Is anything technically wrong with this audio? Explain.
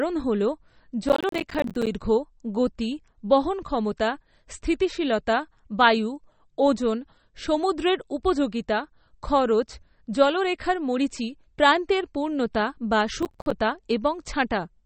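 Yes. Throughout, the speech sounds watery and swirly, with nothing above 8.4 kHz; this is likely MP3 compression at a low bitrate, around 32 kbps, discarding weak frequency content.

From 1.09 to 1.87 s and from 13.22 to 13.52 s, gritty crackle tears through the sound. This is processor overload crackle: many audio buffers of about 10 ms missed their deadlines, each leaving a hard-edged silent gap.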